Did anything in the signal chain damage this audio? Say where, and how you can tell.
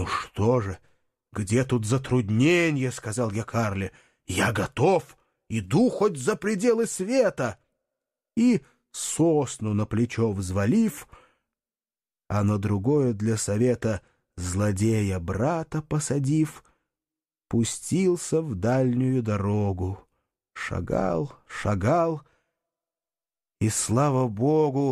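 No, nothing in this speech recording points to damage at any stage of the chain.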